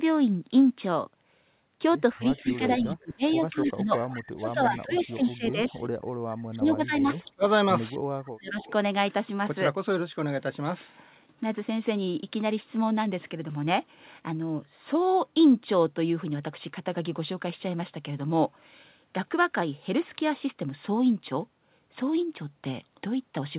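From 2.15 to 5.83 s the speech is repeatedly pulled down, by about 20 dB at its deepest and for around two seconds in total, the signature of speech suppressed in double talk. The echo canceller was likely confused by both sides talking at once and turned down the near talker along with the echo. It differs from packet loss because the voice sinks and thins in uneven stretches instead of breaking off with clicks or gaps.

Overlapping this, from 2.17 to 2.76 s and from 3.66 to 5.74 s, a faint copy of the speech trails the original by 195 ms at about 20 dB below it. This is echo leak, likely from a loudspeaker echo canceller that did not fully remove its microphone pickup. The fixed, discrete delay sets it apart from room reverberation, which smears continuously instead of repeating.

The suppression returns from 6.42 to 8.58 s, deeper this time at about 30 dB and affecting roughly a second of speech. 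Brief echo scraps appear at 7.0 to 7.24 s, about 30 dB down, and at 8.61 to 8.72 s, about 25 dB down, again 195 ms behind the speech.

Throughout the clip, nothing above 4 kHz is present, which fits a narrowband 64 kbps G.711 mu-law call path.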